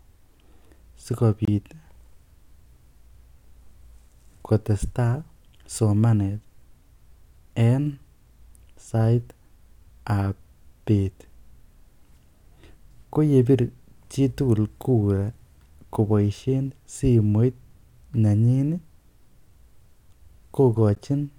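Separately encoded pieces were joined without trimming encoder delay and padding, opening a brief silence in the speech: 25 ms from 1.45 to 1.48 s, and 12 ms at 20.95 s.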